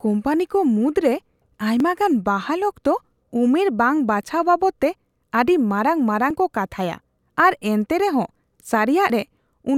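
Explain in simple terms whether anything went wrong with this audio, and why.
The speech jumps at 1.80, 6.30 (just before "ᱠᱚ ᱠᱟᱛᱷᱟᱭᱟ ᱟᱨ") and 9.10 seconds, each skipping a tiny sliver of sound. This is likely a dropped buffer (overrun): the recorder fell behind, lost a short chunk, and joined the surrounding audio directly.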